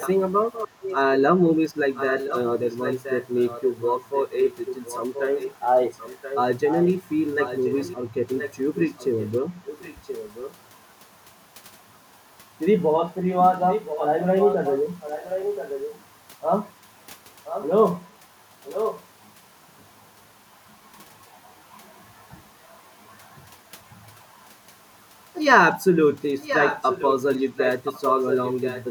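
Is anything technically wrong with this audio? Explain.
Yes, there is an echo leak at 0–0.96, 1.94–6.9, 7.43–10.57, 13.69–16.01, 17.45–17.68, 18.63–19.08 and 26.41 s to the end. Speech returns about 1.03 s late, roughly 10 dB down and about 5 dB down at 13.69, 18.63 and 26.41 s, likely from a far-end loudspeaker the echo canceller failed to suppress. A spectrogram shows duplicate harmonic patterns shifted right by that second.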